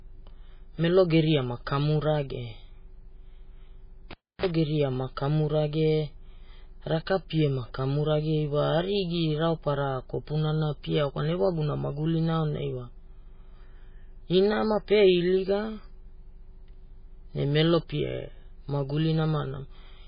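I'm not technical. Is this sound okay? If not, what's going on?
No. The whole recording sounds dull and watery, with everything above 5.1 kHz missing and a swirly edge to the sound, which likely comes from heavy MP3 compression, not a muffled microphone. From 4.11 to 4.46 s you can hear a cable pulled and plugged in: a pop, about 0.3 s of near silence, a short 60 Hz mains buzz, then another pop. Those pops and that buzz set it apart from a simple dropout.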